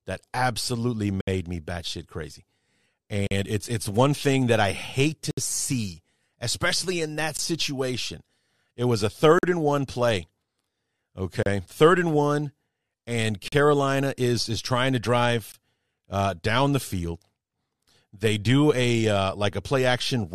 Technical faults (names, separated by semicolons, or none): gap between stream segments